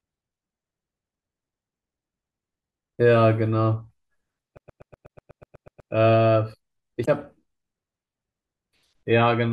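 Speech, with two separate faults. From 4.57 to 5.92 s the audio is caught in a CD stuck on one turn: a scratch keeps knocking the laser back one track, so the same 0.12 s slice repeats 11 times with a brief mute at each jump. The result is a rapid, machine-even stutter. On a waveform this shows as identical blocks tiled side by side, separated by thin gaps of near silence. On a spectrogram it appears as a repeating pattern with vertical seams at regular 0.12 s intervals. Then from 7.02 to 7.09 s there is damaged data in a compressed stream. Corrupted bytes make the decoder misread its frames and lose sync while it hunts for the next valid header, which produces a short glitch lasting about 70 ms. On a spectrogram and on the waveform it is an abrupt break that has no continuity with the audio on either side.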